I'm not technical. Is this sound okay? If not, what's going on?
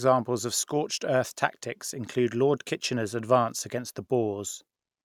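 Yes, this recording sounds fine, with no technical problems anywhere in it. There is nothing here that needs explaining or fixing.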